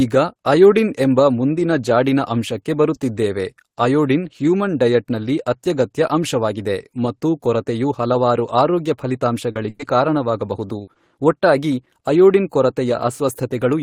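At 9.51 s, about 40 ms of audio arrived too late and the receiver patched it by extending the preceding sound. This short concealed packet loss is heard as a brief smear. A burst of packet loss from 9.69 to 9.81 s dropped about 100 ms; the decoder stretched and faded the last sound, then resumed further on with that stretch missing. Short concealed losses of about 20 ms follow at 10.67 s and 10.93 s as quick smears or wobbles, bracketing a second burst from 10.81 to 10.89 s where about 60 ms is replaced by a fading continuation.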